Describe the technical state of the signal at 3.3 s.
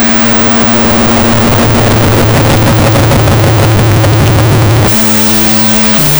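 At 3.3 s the music suffers from a wrong sample width, present throughout: 16-bit samples read as unsigned 8-bit, so each splits into two mismatched bytes. That yields loud noise with the music buried inside, running at half speed and an octave low. A byte-order error would keep the speed.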